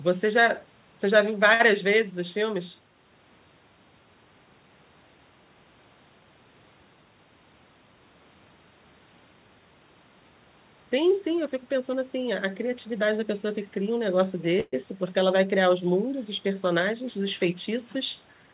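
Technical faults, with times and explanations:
1.54–1.62 s, short stall from a late packet: one sound is held for 57 ms. The jitter buffer ran dry, so playback resumes late but complete.
14.60–14.75 s, call audio freeze: a fading buzz fills 121 ms, including 20 ms of silence. Likely delayed packets emptied the jitter buffer. Nothing is lost.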